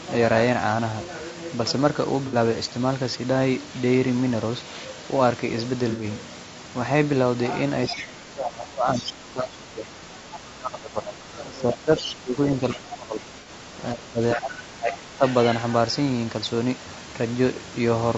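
Across the whole clip the speech sounds rough and grainy, with a hiss between the harmonics and a thin, synthetic-sounding top band. This is likely low-delay AAC compression (AAC-ELD): its short frames resolve pitch poorly, and the damage fits a bitrate around 32 kbps.

At 2.27–2.35 s, 5.90–6.04 s and 13.40–13.49 s there are brief smeared, noisy patches of 60, 90 and 60 ms. This is AAC frame loss with concealment: the decoder rebuilt the missing stretches from the last good spectrum, which fits two or three lost frames each time.

From 7.89 to 13.63 s, and again from 13.93 to 15.24 s, the talker's speech dips by up to about 20 dB. The likely cause is speech suppressed in double talk: with both sides talking, the echo canceller turned down the near talker along with the echo.

Within that first stretch a fainter second voice breaks through at 7.89–8.06 s, 8.95–9.13 s, 10.33–10.39 s and 11.98–12.12 s. 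It sits about 15 dB below the speech, rising to about 10 dB below at 8.95 s. This is likely the other side's voice leaking through, loudspeaker echo the canceller left behind.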